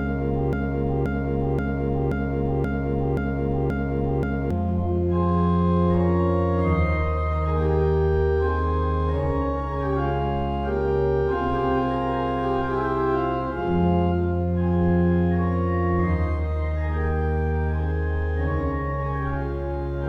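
A broken-record loop is already under way at 0 s and lasts to 4.5 s: a 0.53 s fragment repeats exactly eight times, likely from a stalled stream. The waveform shows identical blocks tiled back to back.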